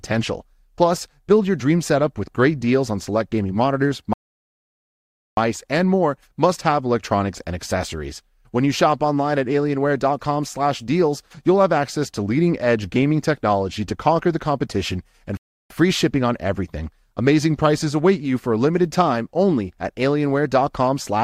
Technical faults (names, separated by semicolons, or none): rebuffering stall